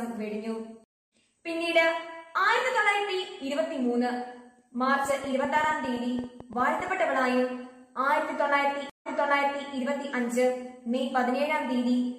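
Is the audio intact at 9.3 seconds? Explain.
No. At 9.3 seconds the clip is inside a stream reconnect running from 8.90 to 9.68 s. The sound cuts to about 137 ms of silence, then comes back softly and repeats material from about 650 ms before the break. The connection dropped, and the player reconnected and started a new decoder mid-stream. The server resent a burst of earlier audio, and the fresh decoder's first frame fades in.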